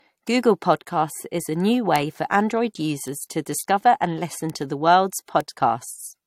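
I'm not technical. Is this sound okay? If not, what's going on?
No. The speech carries the artefacts of more than one compression step heard together, and the very top of the treble is missing, with nothing above about 16.7 kHz. This is likely transcoding between lossy codecs: it was squeezed by one compressor and then squeezed again by another.

There are also four sharp ticks, each a bit error spike, where one or two stored numbers were briefly corrupted. They fall at 1.96 s, between "podcasts is a new" and "for android"; at 3.08 s; at 4.50 s, just after "to discover and listen"; and at 5.41 s, just after "listen to the world's".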